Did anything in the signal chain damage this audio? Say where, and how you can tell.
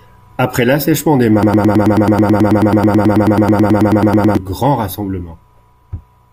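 Yes. After "l'assèchement des", a 0.11 s fragment repeats exactly from 1.43 to 4.37 s, a broken-record loop, likely from a stalled playback buffer replaying its last block.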